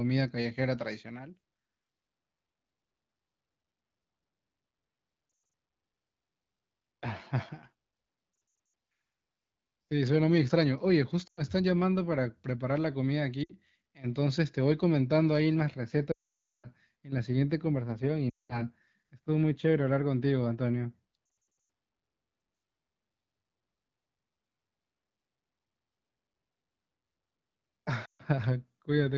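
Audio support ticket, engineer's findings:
Lost AMR speech frames at 5.29, 8.33, 11.27, 13.43, 16.12, 18.29, 21.25 and 28.05 s. Brief warbles and dips. At 16.12 to 16.69 s, a long dropout fades to silence, then weak recovery. Decoder concealment repeating stale parameters under radio errors.

De-emphasis applied wrongly from 15.76 s to end. Smooth treble roll-off, about 10 dB down at 10 kHz relative to 1 kHz. Muffled, dull sound. Likely a redundant or doubled de-emphasis filter in the AMR-WB receive path, which itself carries only light codec coloration.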